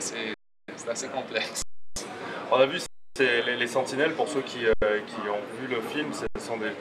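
An underrun with held sample occurs five times: 0.34–0.68 s, 1.62–1.96 s, 2.86–3.16 s, 4.73–4.82 s and 6.27–6.35 s. Each time the output buffer ran dry and the converter froze on its last value. That flat level is why the sound stops abruptly with little or no click, unlike a dropout to zero. Playback then resumes where it paused, so the restart is soft. The 341 ms gaps fit 16384-sample buffers at 48 kHz.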